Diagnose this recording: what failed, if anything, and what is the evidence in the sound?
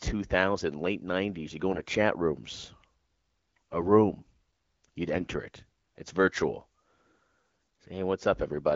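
AMR bit errors, a network fault on the radio link. There are four bursts: 1.71 to 1.83 s, 3.56 to 3.76 s, 5.13 to 5.26 s and 7.51 to 7.69 s. In each, the speech turns hoarse, scratchy and gargly while pitch and level hold. Weakly protected bits flipped, but the checksum still passed. The decoder then placed excitation pulses wrongly and mis-set fine pitch, gain and spectral values. This fits a bit error rate around 7 percent.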